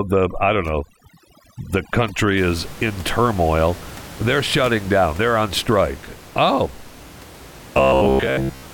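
From the start to 2.37 s, just before "is in turmoil", the speech shows overdone noise removal. The noise reduction was set too aggressively, so individual frequency bands near its noise estimate were pulled far down or switched off, and the quieter components of the voice were removed along with the background noise. The background drops and breaks up into scattered twinkling specks. The room noise, which sits about 19 dB below the speech, is audible in the rest of the recording as part of the acoustic environment.

From 7.78 s to the end at 8.73 s, the speech becomes a rigid metallic buzz pitched at 66.8 Hz. It still follows the rough shape of the speech. This is robotic sound from repeated short buffers. The most likely cause is that new audio was arriving too infrequently, so playback kept repeating the most recent fragment, about 15 ms long, in place of the missing signal. Most of this stretch appears to be repeated material, so much of the real speech is skipped, and the repetition rate imposes a fixed pitch on the sound.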